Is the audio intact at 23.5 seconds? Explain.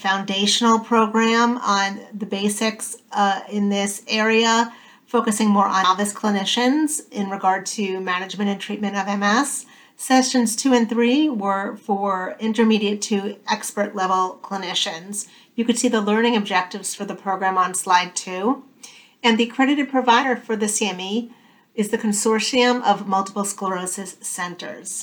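Yes, the audio is intact at 23.5 seconds, with no dropout, glitch or other fault at that moment.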